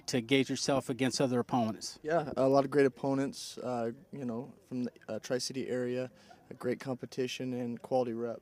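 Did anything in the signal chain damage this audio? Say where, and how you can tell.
No, nothing in the signal chain audibly damaged this audio.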